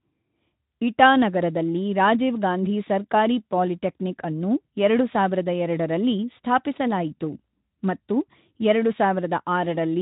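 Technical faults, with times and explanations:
No technical faults can be heard in this speech.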